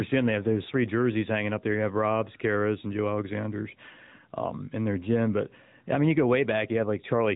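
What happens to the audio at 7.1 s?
At 7.1 s the level swings by around 10 dB, leaving the speech flattened and squashed. This is gain pumping, present throughout the clip, likely from input gain set far too high with a fast limiter clamping down on every peak.

The speech also sounds buzzy, thin and synthetic, with nothing above 3.8 kHz and plainly audible codec damage across the whole clip. This is the AMR narrowband mobile codec, which rebuilds speech from a vocal-tract model and a few pulses per short frame; the degree of damage fits a high-rate mode near 10 kbps.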